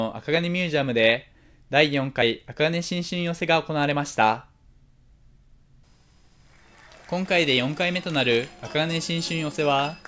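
No technical faults are audible anywhere in the audio.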